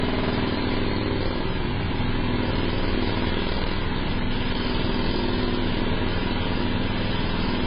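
From start to finish, the audio is dull and smeared, with nothing above 5 kHz. Heavy AAC compression is the likely cause. The encoder discarded the top band and coarsely quantised what remained, leaving a warbling texture. The damage fits AAC-LC at around 16 kbps.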